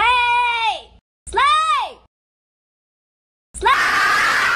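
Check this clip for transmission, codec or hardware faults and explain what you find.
Sample clock jitter runs from 1.74 s to the end of the audio. The converter's clock wanders by around a microsecond and a half, so each sample is taken slightly early or late. Where the waveform changes fastest, that timing error turns into an amplitude error of about 35 dB below the signal. It is heard as a fine hiss or graininess that rises on loud, bright passages and drops away in quieter moments.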